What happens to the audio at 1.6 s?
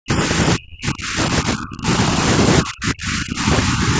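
At 1.6 s the speech is deep inside a stretch of heavy suppression running from 0.55 to 2.25 s. The level collapses, at its worst by roughly 40 dB, and for about a second and a half in total the speech dips and breaks up into fragments. This is speech suppressed in double talk, likely because an echo canceller, faced with both sides talking at once, mistook the talker for loudspeaker echo and turned the signal down.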